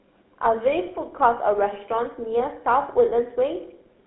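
From start to finish the speech carries GSM full-rate codec damage, which fits 13 kbps coding. Excitation rebuilt from sparse regular pulses gives a plainly buzzy, gravelly roughness. A spectrogram shows nothing above 3.5 kHz or below 250 Hz, with smeared harmonics.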